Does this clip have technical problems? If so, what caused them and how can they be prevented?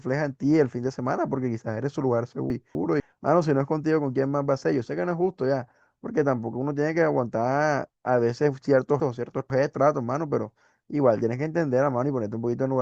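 Yes. Chunks out of order at 2.5 to 3.0 s and 9.0 to 9.75 s. A 250 ms block of speech plays one chunk late, then two chunks late, after audio meant to follow it. The speech jumbles at the hard joins. Sequence-numbering chunks and reordering them in a buffer before playback prevents this.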